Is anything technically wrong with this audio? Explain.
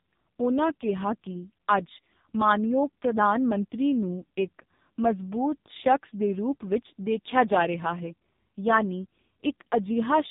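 Yes. The whole clip carries AMR narrowband mobile codec damage, and it's heavy. Nothing passes above about 3.8 kHz, so the speech sounds boxed in and phone-like. The coder is rebuilding the voice from a crude vocal-tract model fed by a few pulses per frame. The strongly buzzy, synthetic edge fits one of AMR-NB's lowest modes, around 5 kbps.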